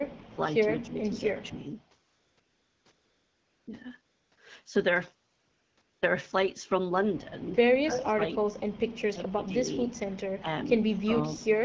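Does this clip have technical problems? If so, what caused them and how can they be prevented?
Yes. The talker keeps getting ducked in what sounds like speech suppressed in double talk, at 0.32 to 0.38 s, 0.81 to 1.0 s, 1.35 to 1.58 s, 7.8 to 8.64 s, 9.12 to 9.55 s, 10.4 to 10.48 s and 10.97 to 11.5 s. The early dips are mild, about 5 to 15 dB. The later ones go as deep as about 25 dB, so chunks nearly vanish. The likely cause is the far end talking at the same time: the echo canceller can't tell its own talker from the loudspeaker echo and pulls everything down. Better echo cancellation with proper double-talk detection, or a headset on the talker's side, would prevent it.

Between phrases you get AMR comfort noise, where the phone stops sending speech frames and the receiver fills the gap with smooth synthetic hiss. It happens at 2.07 to 2.37 s, 2.39 to 2.85 s, 2.91 to 3.67 s, 4.05 to 4.31 s, briefly at 4.35 s, then 5.33 to 5.47 s, 5.49 to 5.77 s and 5.81 to 6.01 s. 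The background keeps switching between real room sound and that even fill, and quiet tails can get clipped. Turning off discontinuous transmission, or making its voice activity detection less aggressive, prevents this.

There's also a short echo leak from 7.92 to 8.06 s. A copy of the voice comes back about 252 ms late and only about 5 dB below the direct sound. That fits a loudspeaker on one side whose canceller didn't fully remove what its mic picked up. Lower speaker volume or a properly tuned canceller would stop it.

The codec sounds like AMR-WB at around 12.65 kbit/s, with only light coding damage.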